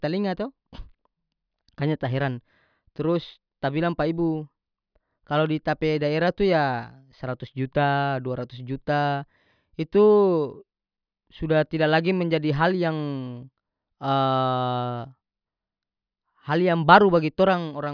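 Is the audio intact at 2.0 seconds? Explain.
Yes, the speech at 2.0 seconds is intact, with no fault at that moment.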